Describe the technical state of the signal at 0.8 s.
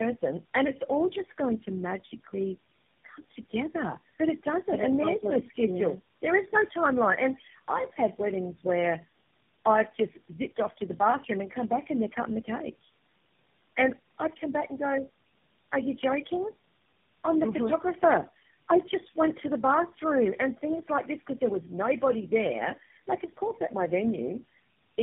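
At 0.8 s the speech carries tandem speech coding, present throughout the clip: it sounds coded and recoded by what fits about four low-rate speech codecs in a row, each working on the last one's output, leaving it rough, muffled, warbly and empty above 3.7 kHz. The stacked roughness and warble set it apart from a single codec pass or a plain band limit.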